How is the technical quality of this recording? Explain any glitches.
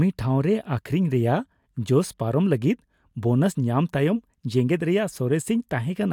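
No glitches to report; the recording holds steady throughout with nothing to flag.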